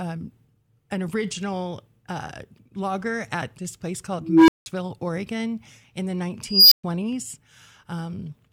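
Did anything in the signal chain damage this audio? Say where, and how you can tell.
Yes. At 4.20 s and 6.44 s an unstable filter in the processing stage swells a tone (low, near 300 Hz, then high, near 5 kHz) over about 0.28 s into clipping, then drops out for 180 ms and 120 ms. Acoustic feedback would plateau rather than collapse into silence.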